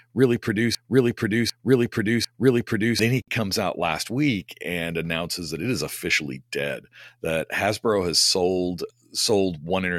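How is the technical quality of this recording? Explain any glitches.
The quality is let down by two distinct glitches, both in the first few seconds of this speech clip.

The first is a broken-record loop that's already running when the clip begins and lasts until about 2.99 s, just before "then he comes out." A fragment of about 0.75 s plays back to back, exactly the same each time, repeating three times. The likely cause is a player, encoder or stream that stalled and kept pushing out the last chunk it had buffered. Whatever should have been heard in those seconds is gone.

The second is a gap at a join of encoded pieces, at 3.22 s, between "then he" and "comes out last week." A gap of about 56 ms opens in the speech, with its edges smeared by the codec so the truly silent part is shorter, then the speech picks up right where it left off. That happens when segments are encoded separately and stitched together without trimming, so each encoder's start-up delay and end-of-segment padding stay in and add up to a short hole in the audio.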